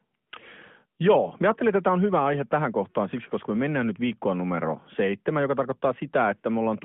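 No technical faults can be heard in the speech, which comes over an AMR-NB narrowband mobile link at 12.2 kbps, confined to the telephone band of 150 Hz to 3.4 kHz and carrying only a light coding colour.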